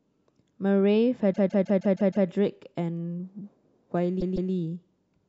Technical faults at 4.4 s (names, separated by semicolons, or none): repeated frames